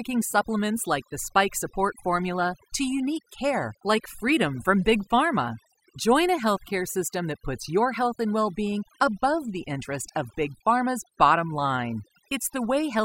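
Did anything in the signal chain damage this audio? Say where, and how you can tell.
Yes. Overdone noise removal in the call-processing stage damages the whole speech clip. Between phrases the background drops to near silence dotted with twinkling specks. A suppressor set too aggressively pulls any frequency band near its noise estimate far down or out, taking quiet voice detail with it. On a spectrogram, the gaps show scattered isolated pixels and the speech harmonics look ragged and hollowed.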